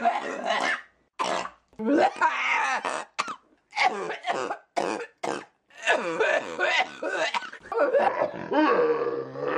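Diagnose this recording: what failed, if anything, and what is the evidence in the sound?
A section at the wrong speed runs from 8.08 s to the end. It plays at 0.624 times normal speed, about seven semitones lower. The likely cause is a playback clock mismatch.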